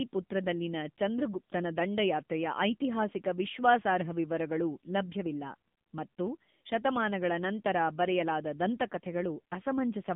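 From start to finish the speech runs through the AMR narrowband mobile codec: nothing above 3.8 kHz, a thin 150 Hz–3.6 kHz band, and a buzzy, synthetic edge that fits a low rate around 7.95 kbps.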